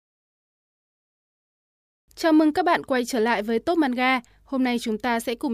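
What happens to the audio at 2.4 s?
Nothing goes wrong at 2.4 s: the speech carries on intact through that moment, with no dropout, click or distortion.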